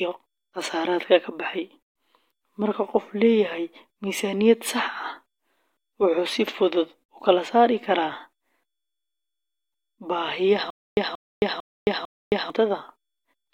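Speech clip, and it runs cleanly until about 10.7 s, where it falls into a stutter with silent gaps through to 12.5 s. A short burst of about 182 ms comes back four times, each followed by roughly 268 ms of dead digital silence, so it pulses at a steady 450 ms pace. Likely the stream stalled and kept replaying its last fragment on each retry, and whatever should have played there is simply gone.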